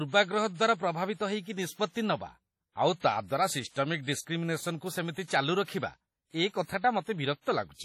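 From start to finish the speech has a ringing, washy quality, with a hiss that swells and fades along with the voice, and there is no content above about 18.4 kHz. The smearing is heavy, which points to likely WMA compression at a low rate, around 32 kbps. The transform coder spreads its quantisation noise across long blocks tens of milliseconds wide and zeroes weaker spectral lines, which leaves the voice blurred.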